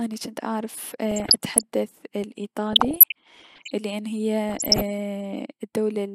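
Weak reception let bit errors, about 0.7 percent, slip past DAB error correction into the MP2 data. This DAB burbling garbles sub-band levels frame by frame over the speech after "جنت اعرف" at 1.11–1.63 s, then at 2.73–3.72 s and 4.49–4.82 s.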